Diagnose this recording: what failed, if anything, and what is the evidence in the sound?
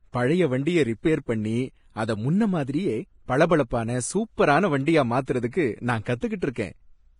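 The speech sounds hissy and grainy throughout, with roughened tones and nothing above 10.5 kHz. This is likely Vorbis compression at a low quality setting, consistent with a bitrate near 30 kbps, where coarsely quantised treble detail has turned into noise of similar energy.

At 6.21 s, a brief hiss runs ahead of a sharp attack, blurring its onset. This pre-echo is a codec-stage fault: quantisation noise sized for the loud attack was spread across the whole transform block, filling the quiet moment before it.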